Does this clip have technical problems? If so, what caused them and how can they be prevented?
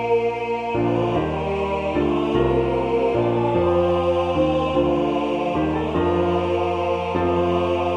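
No, nothing in this clip stood out as a technical problem on listening, so there is nothing here that needs preventing.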